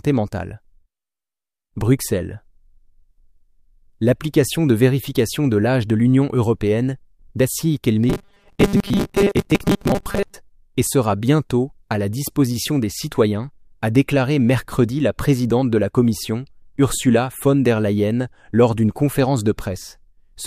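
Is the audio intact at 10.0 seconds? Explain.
No. At 10.0 seconds the sound has turned robotic, with a rigid, metallic buzz at 200 Hz. This robotic sound from repeated short buffers runs from 8.09 to 10.38 s. It is likely caused by new audio arriving too seldom. The playback fills each gap by looping the last short stretch, and about half of the audio is repeated this way. A 200 Hz buzz fits a 5 ms buffer being replayed over and over.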